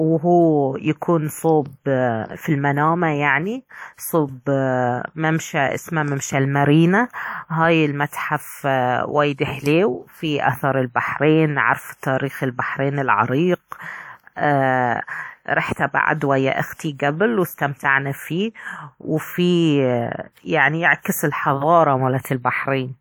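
Pre-echo appears at 22.21 to 22.24 s, near the end of the speech. The transform codec spread quantisation noise across its whole block, so about 38 ms of hiss arrives before a sharp attack, leaving that onset sounding soft and smeared.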